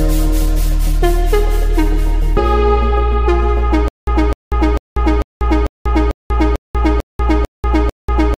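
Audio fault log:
3.88 s to end, stutter with silent gaps: a 255 ms burst returns ten times every 446 ms with silence between, likely a stalled stream replaying its last fragment.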